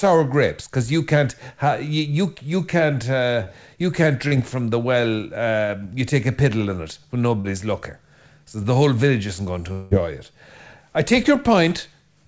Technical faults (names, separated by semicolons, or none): short concealed packet loss; long network dropout